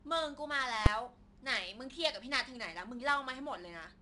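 A speech clip carrying 4-bit ADPCM compression throughout. Each loud passage brings a gritty hiss that rises and falls with the level, and sharp attacks distort because the adaptive step size cannot grow fast enough. The sound points to a rate near 89 kbps, and nothing is present above 10.6 kHz, which dulls the top end. Unlike a perceptual codec, there is no swirly or watery smearing, only broadband noise riding under the signal. At 0.86 s a single loud bang marks invalid numbers at full scale: a calculation produced infinite or undefined values that were forced to the output's extreme for a 5 ms block. That block is too short to separate the onset and release pops, so they merge into one hit. A dropout leaves a gap of silence, but this event slams the output to its limit.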